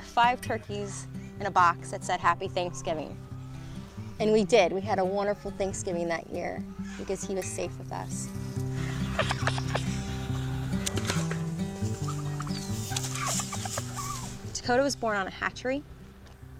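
No technical fault can be heard anywhere in the audio, and the signal holds steady throughout with nothing that needs attention.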